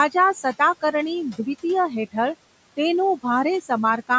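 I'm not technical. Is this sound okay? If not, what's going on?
No, there are noise suppressor artifacts all the way through this speech. A noise suppressor keeps pushing the room's background noise down, hard in the gaps and less under the talking.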